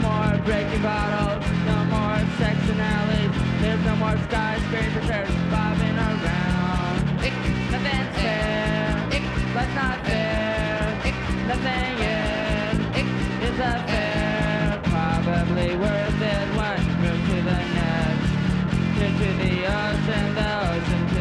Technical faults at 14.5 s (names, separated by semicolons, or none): none